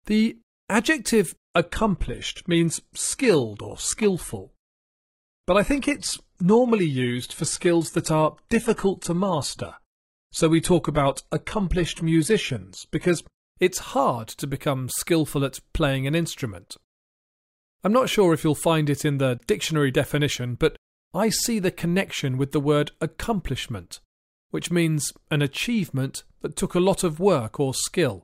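From 1.45 s to 13.45 s the speech plays through an adaptive stream at a lower bitrate. The connection slowed, so the player switched to a leaner version. The sound fits a drop from 96 kbit/s AAC-LC to a 16 kbit/s HE-AAC stream. Nothing is left above 11.8 kHz. The upper band turns thin and synthetic, as rebuilt treble replaces the real detail. The change in quality is sudden in both directions, with no gap.

At 16.69 s there is an underrun with a held sample. The output buffer ran dry for about 15 ms. The converter froze on its last value, so the waveform goes flat. The sound stops almost without a click. Roughly 15 ms of live audio was lost meanwhile. A second underrun follows from 19.38 s to 19.40 s, lasting 20 ms, with about that much audio lost.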